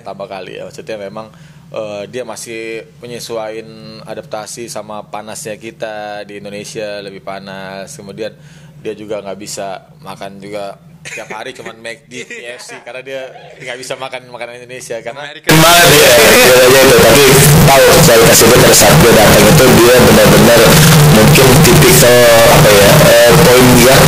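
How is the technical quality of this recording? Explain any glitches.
The recording has one serious fault, covering the final stretch. From 15.49 s to the end, the audio becomes a loud, harsh, buzzing block. This is float read as integer: 32-bit float samples were likely interpreted as 32-bit integers, so sign and exponent bits dictate the level. The waveform turns into a near-square slab at an almost fixed, high level, with quiet background raised as loud as the main sound. The spectrogram fills with dense broadband energy, yet pitch contours stay traceable.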